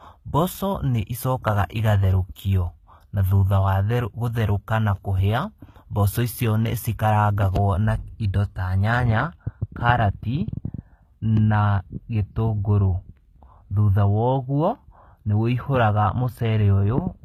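Throughout the speech, s sounds turn gritty and metallic, with nothing above 14.9 kHz. This likely comes from HE-AAC compression rebuilding treble from copied lower bands at a low bitrate.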